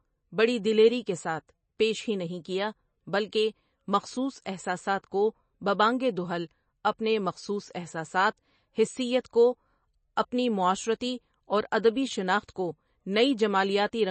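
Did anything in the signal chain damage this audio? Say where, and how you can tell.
Yes, the damage comes from the codec stage. Throughout the speech the top end stops dead at 8.3 kHz, and the sound has a plainly audible watery, swirly quality, with s sounds turning metallic. On a spectrogram this shows as a hard flat ceiling at 8.3 kHz and patchy holes that flicker on and off between frames. The likely cause is MP3 compression starved of bits, which fits a rate around 32 kbps. Weak frequency lines are zeroed and the treble is discarded.

The same codec causes pre-echo just after "اپنی معاشرتی اور ادبی", from 12.45 to 12.48 s. For about 37 ms a short hiss runs ahead of a sharp onset, so the attack sounds soft and smeared. In the waveform, a low-level noise smear rises before the transient instead of clean silence. A spectrogram shows a broadband haze leading into the onset. The quantisation noise sized for the loud attack was spread across the whole transform block, including the quiet moment before it.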